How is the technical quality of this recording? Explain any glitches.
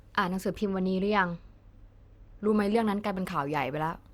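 The technical quality suffers from channel delay (comb filtering) between 0.60 s and 2.48 s. One channel falls behind the other by roughly two samples, a few hundredths of a millisecond, and the two are then summed to mono. Components shared by both partly cancel, cutting a notch at around 10 kHz. Through that stretch the speech loses its top-end air and sounds dull and veiled.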